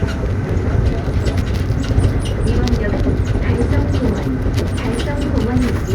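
No technical faults can be heard anywhere in this recording of sounds. Nothing in it calls for a time or a value to be noted.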